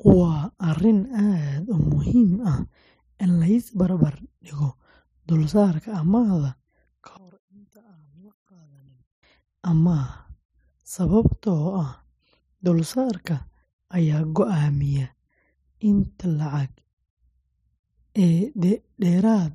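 Speech recording: from 7.17 to 9.23 s the centred speech drops by about 30 dB to a faint residue, likely one channel inverted and cancelling on mono summing.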